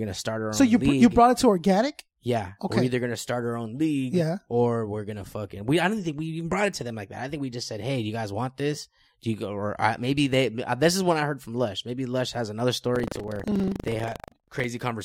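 Right after "has another", from 12.92 to 14.67 s, there's buffer tearing: writer and reader have slipped in the ring buffer, so about a tenth of each period replays audio roughly 150 ms stale. Those hard joins give a 25 Hz robotic rattle under the speech.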